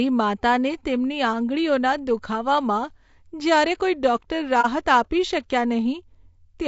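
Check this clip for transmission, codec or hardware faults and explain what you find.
Two faults are present in this speech clip. Throughout, the voice sounds rough and grainy, with noise filling the gaps between harmonics and a thin, synthetic-sounding top band. This is likely low-delay AAC compression (AAC-ELD) at a bitrate around 32 kbps. Its low-delay frames code about 500 frequency lines each, and at this low bitrate the bits run out.

From 4.61 to 4.66 s there is AAC frame loss with muting. About 30 ms of audio, consistent with one lost frame, was zeroed by the decoder, and the overlapping windows fade the sound out and back in. The result is a brief dip, which separates it from a hard dropout.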